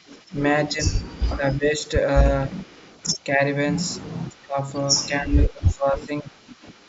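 A short speech recording carries an echo leak from 0 to 1.37 s and again from 2.55 s to the end. A faint copy of the speech returns 259 ms late, around 30 dB below it. The likely cause is a far-end loudspeaker whose echo canceller let some of its microphone pickup through. Between 0.68 and 6.35 s, speech suppressed in double talk is heard. The level dips by as much as roughly 15 dB, about two seconds in all. Overlapping talk likely left the canceller unable to separate talker from echo, so it ducked both.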